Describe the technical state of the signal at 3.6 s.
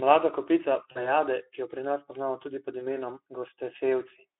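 At 3.6 s the speech is intact, with no dropout, click or other fault, only the narrow 300 Hz to 3.5 kHz telephone band and the light, slightly hoarse texture of the Speex codec at 15 kbps.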